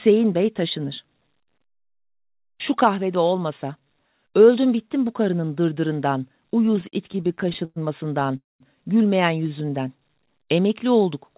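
From 6.66 to 7.78 s the packet flow kept falling behind playback, so the jitter buffer drained over and over: repeated stalls, heard as a stutter. Sixteen times the receiver stretched the last sound to bridge the wait, adding about 0.3 s in total, with the longest fill 111 ms, enough for the tail of the sound to fade. Concealment covers 27% of that stretch, so nothing is lost, but the audio hiccups and drags in a run of small catches.

At 8.37 to 8.62 s comes a call audio freeze. The buffer most likely ran dry because packets were held up in transit. The sound hangs on a brief continued fragment that fades, then drops to silence for about 190 ms before resuming exactly where it stopped. That inserts a 232 ms gap into the flow, with nothing cut out.

From 9.49 to 9.71 s a jitter buffer slow-down follows, as the receiver rebuilt its reserve by repeating single pitch periods. This adds 40 ms and plays the span at 85% speed while the pitch stays put, so the sound is briefly drawn out.

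Throughout, the call path leaves nothing above 4 kHz, which fits a narrowband 64 kbps codec.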